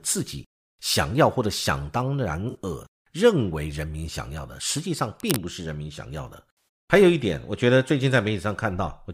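At 2.50 to 2.56 s there's a brief AAC frame loss with concealment, a smeared, phasey patch of about 43 ms, which fits two lost frames. The decoder papered over the gap by reusing the last good spectrum. At 6.57 to 6.68 s it happens again for about 107 ms, which fits five frames.

From 5.20 to 5.39 s there's a dense, uneven scratching burst sitting about 5 dB under the speech. It sounds like cable scratch noise, likely a worn cable or connector being moved so its contact resistance jumped around.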